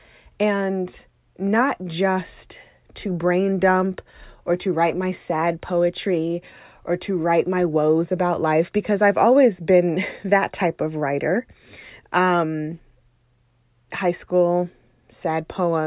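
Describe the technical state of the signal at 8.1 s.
At 8.1 s the speech signal is intact, with no audible technical fault at that moment.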